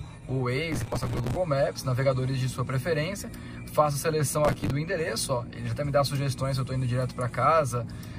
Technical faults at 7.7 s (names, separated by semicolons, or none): none